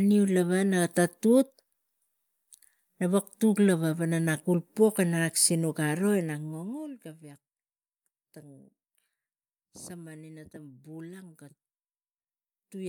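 No technical faults are audible.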